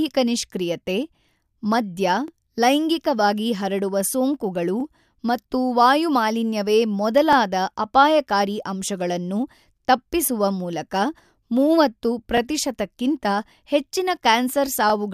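Overlapping chunks: speech processed in 2.5 s chunks, each starting about 23 ms early, replays that sliver at every join as a regular stutter-click at 2.28–2.30 s (before "ಲೈಂಗಿಕವಾಗಿ ಹರಡುವ ಸೋಂಕುಗಳು ಮತ್ತು"), 4.80–4.83 s (before "ಮತ್ತು ವಾಯು ಮಾಲಿನ್ಯವೇ"), 7.33–7.35 s, 9.85–9.87 s (before "ತಪ್ಪಿಸುವ ಮೂಲಕ"), 12.37–12.40 s and 14.90–14.92 s.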